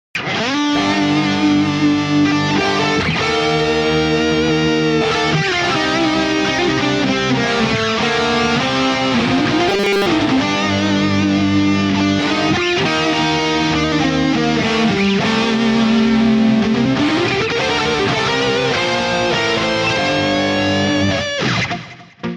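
From 9.69 to 10.08 s the sound collapses into a rigid, metallic drone pitched at 200 Hz: robotic sound from repeated short buffers. The likely cause is audio arriving too slowly, so playback kept looping the most recent fragment, about 5 ms long, which fits the 200 Hz pitch, while most of the real material in that span was skipped. Unlike a dropout or a warbling pitch drift, the tone stays locked at one pitch whatever the underlying sound does.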